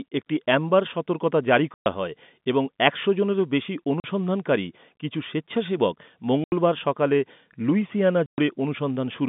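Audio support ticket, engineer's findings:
Packet loss filled with silence at 1.74, 4.0, 6.44 and 8.26 s: 120, 40, 80 and 120 ms dropouts, multiples fitting 20 ms packets. They show as flat silent gaps in the waveform and blank vertical stripes on the spectrogram, with hard edges.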